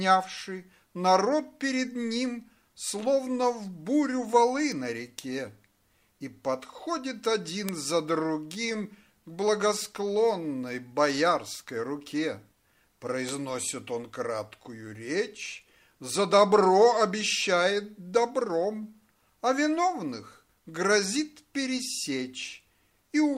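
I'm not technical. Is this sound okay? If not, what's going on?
No. There are three bit error spikes, at 4.72, 7.69 and 13.29 seconds. Each is one sharp tick, one or a few values in a row in the stored audio jumping wildly and snapping back. The one at 7.69 is much louder than the others.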